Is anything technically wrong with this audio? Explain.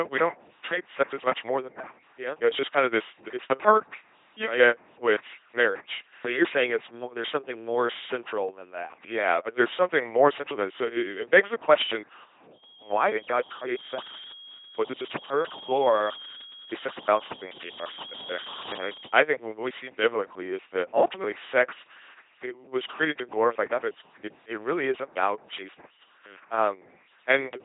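Yes. Throughout the speech, an LPC-10 vocoder leaves a buzzing robotic tone, fitting 2.4 kbit/s, where a pulse-or-noise-driven filter replaces the voice; the spectrogram shows harmonic combs and nothing above 3.8 kHz.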